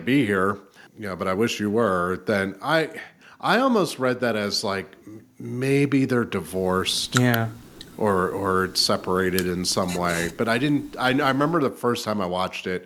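No technical faults are audible anywhere in the recording.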